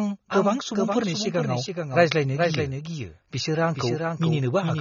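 Throughout the speech, a doubled audio track: a full-band copy about 5 dB quieter trails by roughly 400 ms without decay, likely from a second capture path or an out-of-step edit. Plainly audible AAC compression also runs throughout, with nothing above 6.9 kHz, dulling the sound. This likely reflects AAC-LC at a low bitrate around 24 kbps.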